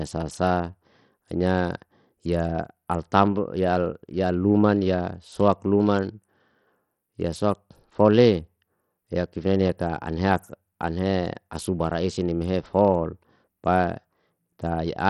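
From start to finish the speech sounds gritty and thin at the top. The treble flickers in and out instead of holding steady, and a coarse, grainy noise with aliasing rides on the sound. This is likely Bluetooth SBC compression at a low bitrate, around 64 kbps by the sound of it. Its small bit pool starves the upper bands of bits and quantises the rest roughly, while content still reaches about 20.7 kHz.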